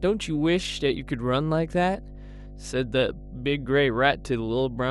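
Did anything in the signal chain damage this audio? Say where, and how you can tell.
Yes. Mains hum from the analogue wiring: a steady 50 Hz tone runs under the speech for the whole clip, only about 15 dB down, from ground-loop or transformer coupling.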